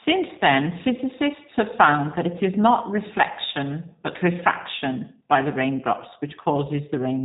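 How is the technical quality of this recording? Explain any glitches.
The technical quality is limited by plainly audible low-bitrate voice coding. G.729 codec damage runs throughout: speech is rebuilt from a filter model and a few pulses, which fits an 8 kbit/s stream, leaving it audibly rough and synthetic, with nothing above 3.8 kHz.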